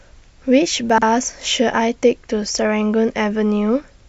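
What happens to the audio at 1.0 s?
Between about 0.90 and 1.02 s you get chunks out of order: one roughly 43 ms block arrived late and plays two chunks after where it belongs. Nothing's missing, but the speech briefly sounds jumbled, with three hard joins.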